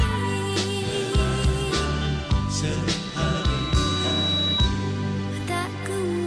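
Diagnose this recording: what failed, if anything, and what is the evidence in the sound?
A loudspeaker feedback squeal appears from 2.94 s to 4.70 s. It is an acoustic loop at the analogue front end, not a converter or codec failure. A single 3.9 kHz tone rises over roughly a second and a half and peaks at about 5 dB above the programme. The microphone is picking up its own loudspeaker, and at that frequency the loop gain exceeded unity. The steady swell distinguishes it from a fixed-level interference whistle, which would start at full strength.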